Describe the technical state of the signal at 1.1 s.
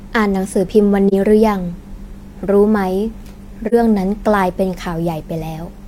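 AAC frame loss with muting, 1.08 to 1.14 s: the decoder zeroed a missing frame, fitting one lost 43 ms frame, so the speech fades into a brief dip.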